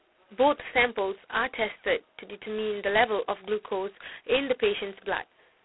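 From start to end, the speech carries G.726 ADPCM damage: a rasping hiss that rises and falls with the speech level, unlike steady background noise, which points to 16 kbit/s, within a 300 Hz to 3.4 kHz band.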